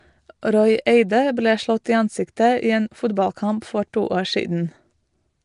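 From the first moment the speech carries a rough, hissy halo and a smeared, underwater colouring, most likely Nellymoser compression, the old Flash microphone codec, at a rate that points to roughly 44 kbps. The damage is plainly audible. Each short block gets only a coarse, fixed bit budget, so weak bands are left empty and refilled with noise. A spectrogram shows nothing above 10.6 kHz and blotchy, grainy texture between the formants.

At 1.84 s a sharp attack is preceded by pre-echo: a short hiss spread over about 11 ms before the onset, which itself sounds soft. The codec spreads quantisation noise across the whole block, so noise meant for the loud attack also fills the quiet instant before it. On a waveform a thin fuzz rises just ahead of the transient. A spectrogram shows a brief broadband smear leading into it.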